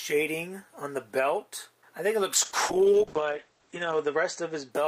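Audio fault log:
2.35–4.77 s, call bitrate drop: the top end narrows from 20 kHz to 8 kHz and the sound turns coarse and muffled for about 1.65 s. This points to the encoder falling from around 48 kbps to roughly 9 kbps after the bandwidth estimate dropped.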